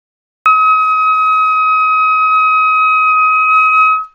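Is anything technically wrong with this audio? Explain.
Yes. There is a cut-off start: the capture or stream began late, so the sound already in progress was missing. The first 0.46 s is digital silence, and at 0.46 s the audio enters abruptly mid-sound, with no natural attack or fade-in.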